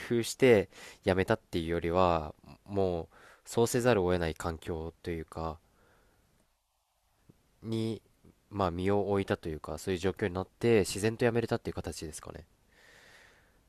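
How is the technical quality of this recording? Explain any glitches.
The technical quality of this recording holds up, with no glitches to explain.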